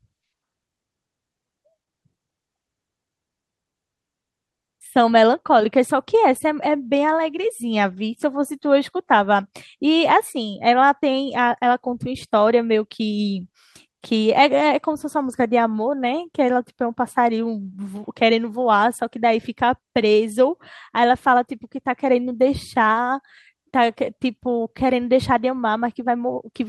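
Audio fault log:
No faults heard anywhere in this speech recording.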